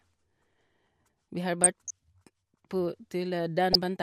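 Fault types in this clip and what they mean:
DAB burbling: residual bit errors from weak digital radio reception slip past error correction into the MP2 audio stream, corrupting sub-band samples and scale factors so individual frequency bands jump in level frame by frame. Here the speech is overlaid with burbling from 1.62 to 1.91 s, and a shorter blip at 3.73 to 3.75 s. The bursts point to bit error rates of roughly 0.2% and 0.15% respectively.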